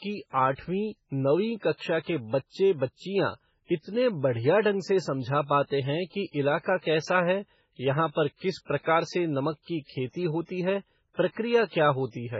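Throughout, likely heavy MP3 compression at a very low bitrate, around 16 kbps, cuts everything above 7.6 kHz, leaving the speech dull, watery and swirly, with smeared consonants.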